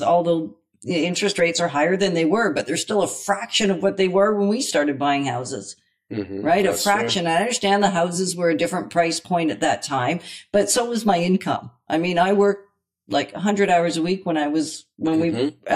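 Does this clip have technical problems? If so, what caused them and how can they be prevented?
Yes. Channel delay (comb filtering) runs throughout: one channel is about 10 ms late, so summing to mono cancels frequencies from near 50 Hz upward, roughly every 100 Hz, giving hollow speech and evenly spaced notch stripes on a spectrogram. Align channels or check mono compatibility before summing.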